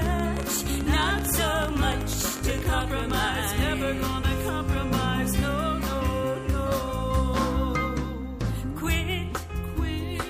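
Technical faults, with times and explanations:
0.06–3.11 s: train of clicks. Short pulses of nearly identical shape arrive at around 12.5 per second on average, but irregularly spaced, giving roughly forty clicks in all. They peak at about 10 dB above the underlying sound, so they read as a distinct ticking or popping laid on top of the audio rather than blended into it. The likely cause is intermittent interference from nearby equipment or a faulty connection or power supply.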